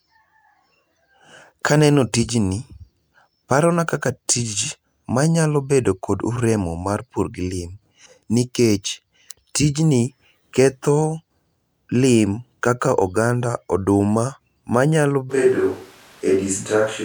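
At 15.32 s the speech suddenly turns roomy and hollow, with thinner bass, and stays that way to the end. This is likely a switch to a distant microphone. Level barely changes. Background room noise sits roughly 30 dB below the speech.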